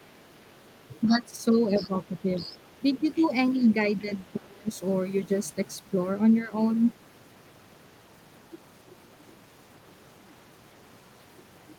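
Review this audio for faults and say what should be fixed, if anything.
Other side's voice leaking through at 1.02–1.08 s, 1.76–1.88 s, 2.4–2.58 s and 3.12–3.22 s: faint scraps of a second voice, roughly 20 to 25 dB below the talker, most likely loudspeaker playback that the echo canceller failed to subtract from the microphone.

Speech suppressed in double talk at 1.08–1.34 s, 1.78–1.91 s, 3.17–3.22 s and 4.36–4.69 s: the talker's level dips while the far side is also active, from a slight drop to a deep cut of roughly 25 dB at 4.4 s, likely the canceller turning everything down when it could not separate the two.

Prevention: give the echo canceller a better-converged, properly delay-aligned reference and a double-talk detector that favours the near talker, or have the talker use a headset so the loudspeaker echo never reaches the microphone.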